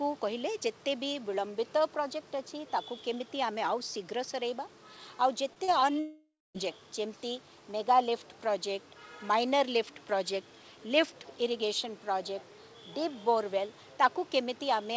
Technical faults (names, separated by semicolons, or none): short concealed packet loss; long network dropout